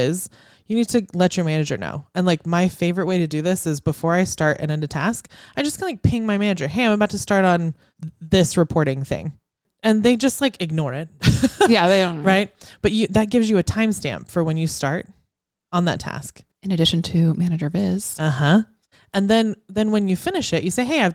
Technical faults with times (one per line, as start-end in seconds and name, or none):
3.09-3.11 lost packet rebuilt from error correction